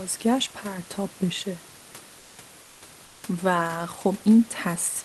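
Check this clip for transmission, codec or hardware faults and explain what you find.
One fault appears twice: comfort noise in place of the background. From 2.61 to 2.81 s and again from 3.05 to 3.23 s, the pauses lose the real room noise and carry a smoother synthetic hiss about 2 dB quieter, likely from Opus discontinuous transmission. The sender's voice detector halted packets, and the receiver filled each gap with generated noise approximating the background.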